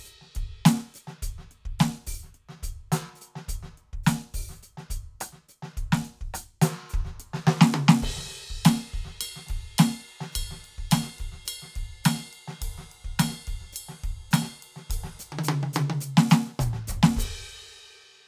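Nothing technically wrong turns up in this music clip; it's just the music, with no faults to point to at any moment.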